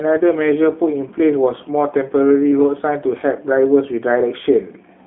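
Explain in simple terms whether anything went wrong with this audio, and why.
Throughout the clip, the G.729 codec, a phone-call speech compressor, rebuilt the speech from a simplified model. That makes it sound rough and synthetic, with nothing above 3.8 kHz.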